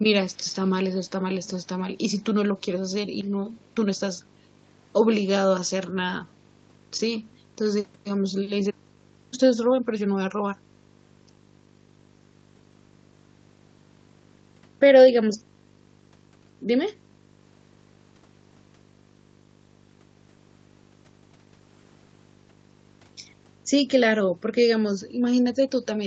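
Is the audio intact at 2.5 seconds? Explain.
No. At 2.5 seconds the speech carries video or display buzz, which runs through the whole clip. A screen or video cable is coupling into the audio path. It adds a buzz at the 50 Hz field rate, with hash riding above it, roughly 30 dB below the speech. The cable also carries a line-rate tone near 15.6 kHz. The call path passes nothing above 8 kHz, so that tone is removed.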